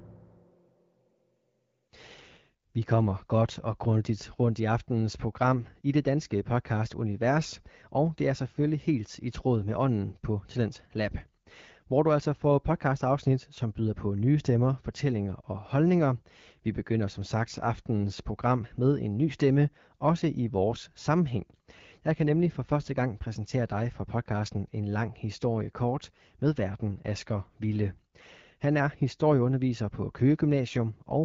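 No technical faults can be heard anywhere in this recording.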